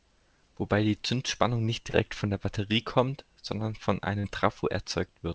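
At 1.90 s and again at 4.20 s, about 40 ms of audio arrived too late for the decoder, a short concealed packet loss each time. The receiver patched each gap by extending the preceding sound before blending back, leaving a brief smear or wobble in this wideband call, where nothing reaches above 8 kHz.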